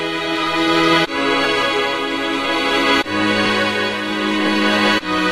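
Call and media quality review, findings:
Overlapping chunks: short clicks/stutters at 0.44, 1.45, 2.45, 3.46 and 4.46 s, one per second. Probable component: chunked processing or transport stage, where each new 1.0 s chunk begins before the previous one ends. About 6.5 ms of audio plays twice at every join, and the duplicated sliver causes the discontinuity. Check chunk boundary and offset handling in the buffering/reassembly path.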